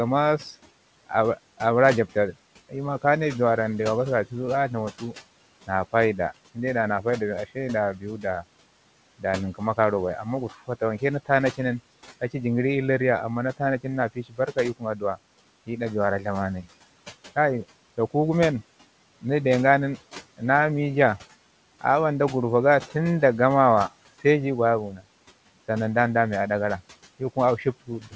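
Speech cut by the noise suppressor occurs at 7.95–8.24 s, 14.15–14.57 s, 24.92–25.05 s and 27.87 s to the end. The suppressor mistook speech for the room noise about 20 dB below it, dipping brief stretches by about 9 dB, then about 15 dB, so sounds come out swallowed.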